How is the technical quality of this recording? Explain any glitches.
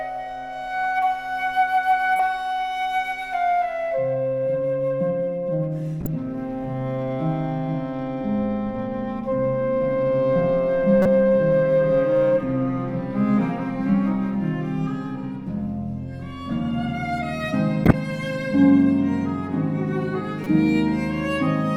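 The recording's quality is marred by five bursts of corrupt frames decoded at 2.17–2.20 s, 6.01–6.07 s, 11.02–11.06 s, 17.85–17.94 s and 20.44–20.47 s. Damaged bits in compressed frames were played anyway, placing energy at wrong frequencies. Each is a brief chirp or noise burst, loudest at 11.02 s and 17.85 s.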